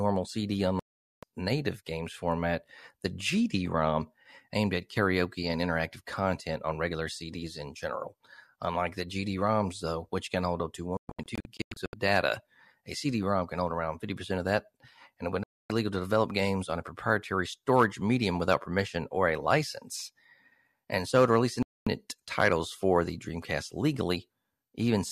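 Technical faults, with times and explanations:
0.79 to 21.87 s, digital broadcast dropout: The speech goes silent at 0.79 to 1.23 s, 15.43 to 15.70 s and 21.63 to 21.87 s. From 10.97 to 11.94 s it breaks into short holes of up to 120 ms. The receiver muted until good frames returned. Missing sound is lost.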